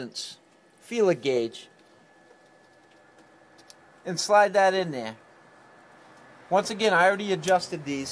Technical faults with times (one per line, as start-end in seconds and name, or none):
none